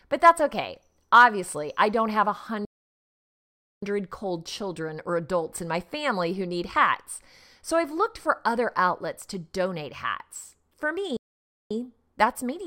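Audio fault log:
2.65–3.83 s and 11.17–11.71 s, playback stall: the speech halts mid-flow into dead silence, for about 1.17 s and then 0.54 s, resuming at "cold children or adults" and at "that's meaningful". The likely cause is the player starving for data or its thread being blocked, so output simply stops. On a waveform these are flat near-silent gaps with abrupt edges; a spectrogram shows empty vertical bands across all frequencies.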